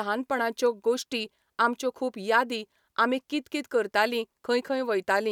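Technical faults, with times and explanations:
No technical faults are audible at any point in this speech recording.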